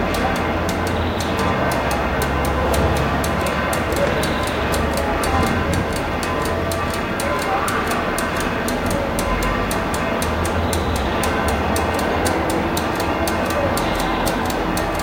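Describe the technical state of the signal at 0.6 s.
At 0.6 s the signal is intact, with no audible technical fault at that moment.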